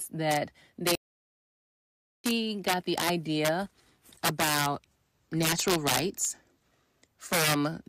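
Throughout the speech there is integer overflow: the level was pushed about 9 dB past the largest value the integer format can hold, and instead of being limited, those samples wrapped round to the opposite sign. Only around one percent of the samples exceed the limit, but each of them swings across the full range at once, so the loud peaks carry violent cracks, much harsher and more abrupt than ordinary clipping.

From 0.95 s to 2.24 s the output goes completely silent for about 1.29 s, a playback stall, then resumes with "got the idea about". The speech stops dead in mid-flow. That points to the player being starved of data or having its output thread blocked, which is the likely cause, until the buffer refilled and output restarted.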